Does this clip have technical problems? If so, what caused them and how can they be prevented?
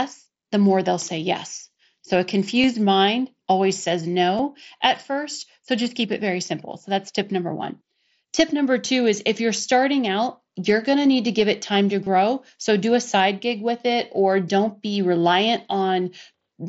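Yes: concealed Bluetooth headset packet loss. Brief patched dropouts at 2.62 s (before "mind always says"), 4.38 s (before "at first") and 12.04–12.07 s (after "give it time to"). Lost headset packets were filled by repeating recent waveform. Keep the phone close with a clear line of sight, away from Wi-Fi congestion.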